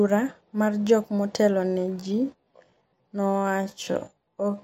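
From 1.64 s to the end of the speech, the pace abruptly drops to about 0.66 times normal while the pitch stays put, a time-stretched section. Software likely lengthened this stretch to fill a set duration by repeating short pieces of the waveform, which makes the audio drag. On a spectrogram, harmonics and consonant bursts spread wider in time with doubled edges, and the waveform shows repeated, slightly overlapping grains.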